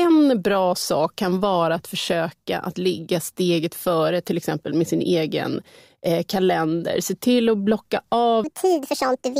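From 8.44 s to the end at 9.40 s, the speech is a section at the wrong speed, likely because that stretch was played back against a mismatched clock that ran it 1.56 times faster than it was recorded. Because speed and pitch are tied together here, the final second of speech suddenly jumps up by about seven semitones and sounds rushed and chipmunk-like, with the pace of delivery visibly quickened right up to the cut-off.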